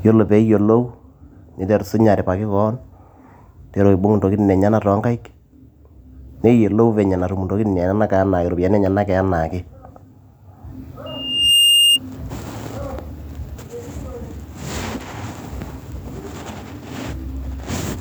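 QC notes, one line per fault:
11.06–11.99 s, loudspeaker feedback squeal: the microphone picks up its own loudspeaker and the loop gain passes one at 2.8 kHz, so that tone feeds itself, swelling over about half a second into a steady squeal roughly 5 dB above the speech before the loop breaks.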